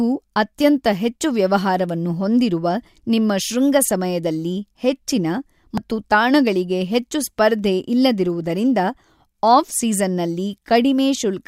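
At 5.78 s there's damaged data in the compressed stream: the decoder hits corrupted frames and loses sync, leaving a tiny glitch in the speech.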